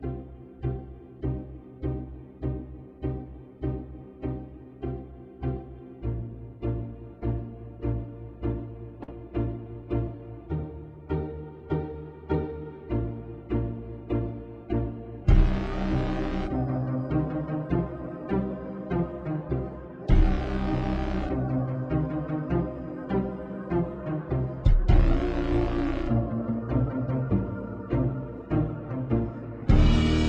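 Right around 9 s the audio skips ahead twice. At 9.02 s a bit of roughly 50 ms vanishes with no gap, and from 9.03 to 9.09 s a bigger chunk, maybe 300 ms, is gone, papered over with about 44 ms of fill before the two sides butt together. That sounds like audio that arrived late and got dropped, or got thrown out when the jitter buffer overflowed, because newer audio was already queued behind it. Right after, from 9.12 to 10.16 s, you get a jitter buffer speed-up. The buffer was still holding more than it wanted, so the receiver snipped out short pitch-period slices over and over, around 70 ms in total. Playback runs at about 106% speed with the pitch unchanged, so that second or so comes across slightly rushed.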